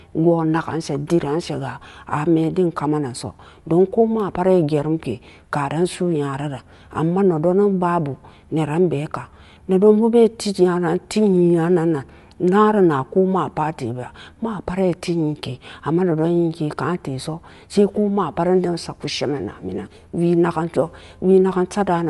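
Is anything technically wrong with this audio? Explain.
Yes. Throughout the speech, nothing is present above 11.5 kHz, and the upper band sounds grainy and breathy. This is likely Bluetooth LC3 compression: the transform codec discards high-frequency detail and fills it with shaped noise, which fits a 48 kbps stream in 10 ms frames.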